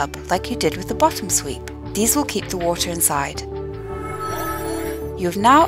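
From 0.84 s to the end, a mains buzz sits well below the main sound. Spikes from a dimmer, rectifier or unshielded line switch twice per 60 Hz cycle, stacking harmonics of 60 Hz up into the kilohertz range. The result is a steady, raspy edge rather than a smooth, low tone. That upper harmonic content is what separates buzz from plain hum, which stays near the fundamental and sounds round and dull.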